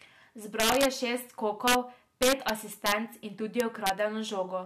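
Integer overflow cracks the speech five times: 0.60–0.85 s, just before "je šest", pushed about 5 dB past full scale; 1.68–1.75 s, right after "je šest", about 2 dB; 2.23–2.50 s, about 3 dB; 2.86–2.92 s, about 4 dB; and 3.60–3.89 s, about 2 dB. Peaks that should have been limited wrap to the opposite sign, so each one is a violent crack, harsher than clipping. The waveform shows peaks suddenly jumping to the opposite sign, and the spectrogram shows bright full-band vertical streaks.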